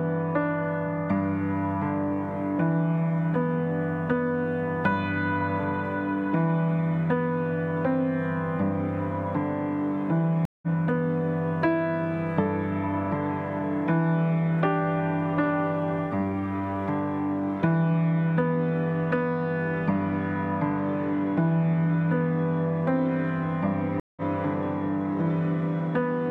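At 10.45 to 10.67 s and again at 24.00 to 24.22 s, the audio drops out for about 170 ms and resumes slightly further along. This is a stream reconnect: the connection broke and a fresh decoder restarted mid-stream.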